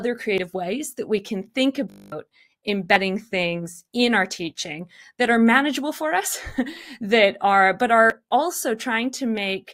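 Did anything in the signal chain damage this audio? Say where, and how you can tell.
Yes. Dropped buffers (overrun) at 0.38 s, just before "ways that we can", and at 8.1 s, just after "that are but". Each is a jump with the speech skipping forward, about 20 ms and about 40 ms respectively, with no silence. This likely comes from the driver or buffer stage: samples were overwritten before the software collected them.

A system hang loop runs from 1.9 to 2.12 s, right after "that we can think". A single 20 ms slice repeats about eleven times, heard as a steady 50 Hz buzz. The driver stalled while the hardware kept cycling its ring buffer, replacing roughly a fifth of a second of speech.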